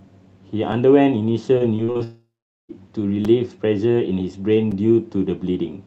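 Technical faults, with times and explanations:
0.72 s, 3.25 s and 4.72 s, repeated buffer: New audio reached the output late, so the device replayed its last block, once at 0.72 s and twice at each later point. The repeated slice fits a buffer of about 5 ms, so each repeat is heard as a brief click or buzz with hard joins.
1.58–2.01 s, repeated packet loss (robotic sound): Packets failed to arrive again and again, leaving five holes, the longest 35 ms, with about 140 ms missing overall. The receiver patched each hole by extending the preceding sound, so roughly a third of the span is filler, heard as choppy speech with pieces missing.
2.03–2.71 s, long network dropout: The likely cause is a network outage that delivered no audio for about 660 ms. The receiver first stretches the last sound into a fading buzz, then about 420 ms of near silence follows before the speech resumes with that portion gone.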